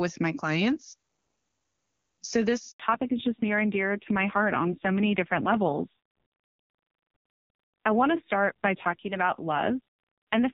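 At 2.72 s the speech cuts out in a handover gap. The call was being passed from one network to another, and no speech frames arrived during the switch. The sound fades within a few tens of milliseconds and stays silent for 80 ms, until 2.80 s. Whatever was said in that span is simply gone. It is heard as a brief, clean hole in the speech.

From 2.80 s to the end, there is a fallback to narrowband. Before the gap, the HD Voice codec carries clear wideband speech, with at most faint coding damage, at a quality that points to its top rate. After the switch, nothing above 4 kHz remains. Sibilants lose their crispness, and the voice turns dull and muffled. It also sounds rougher and grainier, which fits a low-rate narrowband AMR mode.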